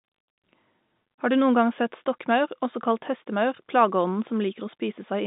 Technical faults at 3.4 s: none

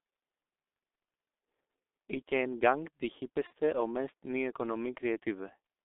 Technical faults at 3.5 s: G.723.1 codec; VoIP packet loss concealed by the speech codec

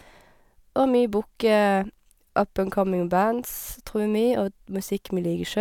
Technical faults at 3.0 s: none

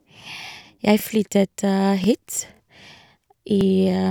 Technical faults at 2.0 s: overlapping chunks

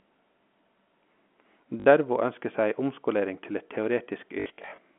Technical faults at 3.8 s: none

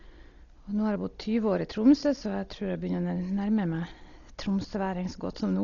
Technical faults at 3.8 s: Dolby Digital compression

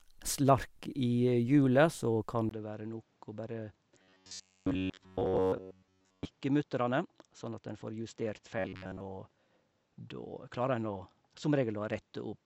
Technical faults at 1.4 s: none

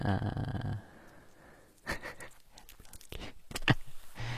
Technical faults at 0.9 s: HE-AAC compression

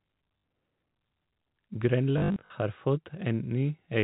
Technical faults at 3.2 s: none

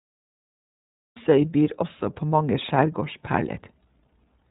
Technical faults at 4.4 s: iLBC codec

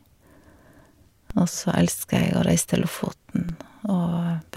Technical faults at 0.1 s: none

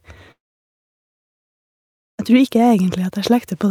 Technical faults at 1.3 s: long network dropout

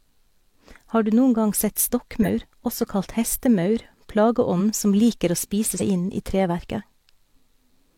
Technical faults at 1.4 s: none

